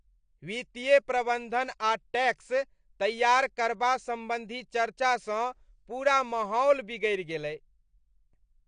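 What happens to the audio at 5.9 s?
At 5.9 s you're hearing the same damage that runs through the whole clip: the speech is dull and smeared, with nothing above 9.8 kHz and a fizzy, warbly edge on sibilants and held sounds. That's likely AAC compression, AAC-LC at a low bitrate. The kind of damage here points to something around 32 kbps. At that rate the encoder drops the top of the spectrum and starves or noise-fills bands it can't afford to code properly, which is where the texture comes from.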